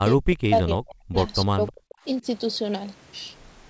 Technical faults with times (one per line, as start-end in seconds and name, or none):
0.00-1.16 speech suppressed in double talk
1.45-2.26 speech suppressed in double talk